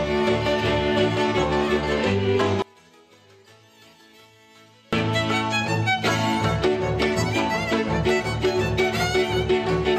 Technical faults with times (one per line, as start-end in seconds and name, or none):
2.62-4.93 one channel inverted